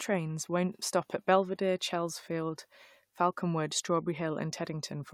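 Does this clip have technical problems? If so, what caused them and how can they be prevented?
No, this clip has no technical problems, so there is nothing to prevent.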